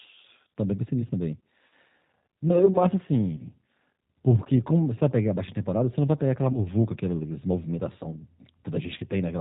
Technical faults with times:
0.00-9.41 G.729 codec
3.36-3.42 VoIP packet loss concealed by the speech codec
6.52-6.67 VoIP packet loss concealed by the speech codec

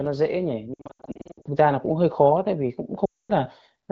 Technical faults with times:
0.73-1.48 lost AMR speech frames
3.05-3.32 lost AMR speech frames

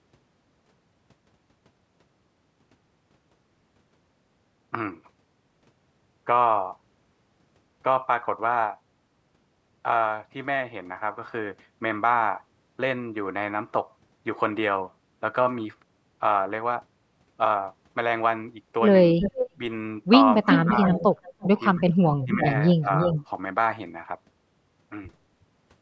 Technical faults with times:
19.14-19.61 speech suppressed in double talk
19.20-19.49 echo leak
20.41-21.22 speech suppressed in double talk
20.48-23.26 echo leak
21.76-23.16 speech suppressed in double talk

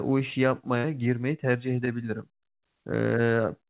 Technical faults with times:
0.78-0.86 burst of packet loss

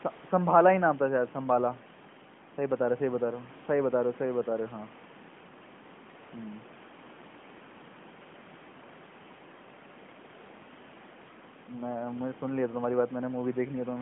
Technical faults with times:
none

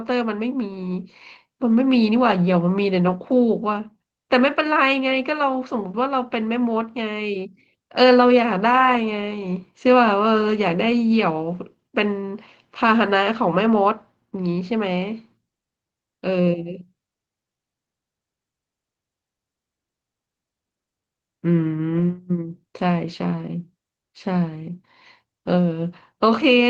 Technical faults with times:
1.69-1.75 lost packet rebuilt from error correction
3.07-3.17 lost packet rebuilt from error correction
21.97-22.03 lost packet rebuilt from error correction

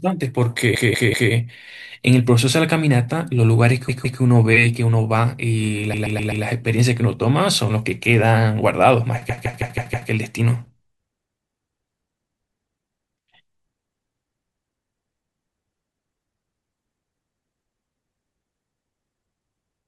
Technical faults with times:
0.75-1.33 repeated frames
3.89-4.21 repeated frames
5.93-6.45 repeated frames
9.29-10.09 repeated frames

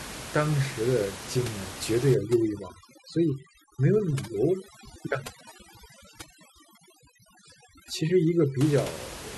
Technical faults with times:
2.14-8.61 overdone noise removal

